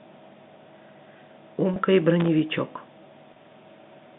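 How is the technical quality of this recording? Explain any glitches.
The speech carries three brief glitches, two of one kind and one of another, heard over a telephone-band signal running from about 150 Hz to 3.7 kHz.

Packet loss with pitch repetition occurs at 1.74–1.76 s and again at 3.34–3.36 s. Each time about 20 ms of audio went missing, which fits a single lost packet. The receiver filled the gap by repeating the last pitch period of the speech and fading it, so each dropout is heard as a tiny held, slightly buzzy sustain rather than a hole.

Loose connector crackle appears from 2.20 to 2.28 s. An unreliable contact somewhere in the chain was making and breaking rapidly, chopping the signal on and off many times within those 80 ms. The result is a short, irregular burst of scratchy crackle laid over the speech, distinct from the smoother repeated-pitch patches on either side of it.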